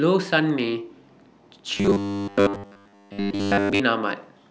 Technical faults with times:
1.75-3.80 robotic sound from repeated short buffers

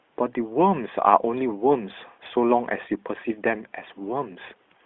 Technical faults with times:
none

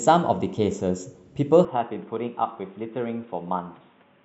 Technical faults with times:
1.65-4.24 input switched to a poorer device

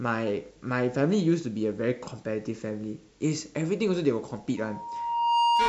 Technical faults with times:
4.57-5.68 loudspeaker feedback squeal

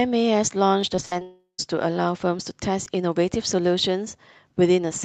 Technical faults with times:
0.81 repeated buffer
0.95-1.22 short concealed packet loss
1.05-1.13 burst of packet loss
1.22-1.60 long network dropout
2.85 repeated buffer

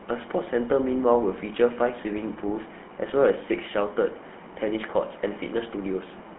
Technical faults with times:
0.00-6.39 GSM full-rate codec

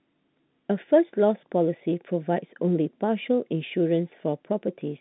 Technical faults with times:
none

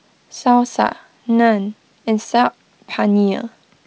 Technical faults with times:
none

